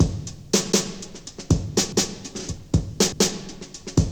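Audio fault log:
0.72–0.92 s, 1.92–2.12 s and 3.12–3.32 s, overlapping chunks: the audio was handled in 1.0 s chunks, and each new chunk began 200 ms before the previous one had finished, so the last 200 ms of every chunk plays a second time at the join. The result is a short stutter, recurring at a regular 1.2 s spacing as the same fragment of sound jumps back and repeats.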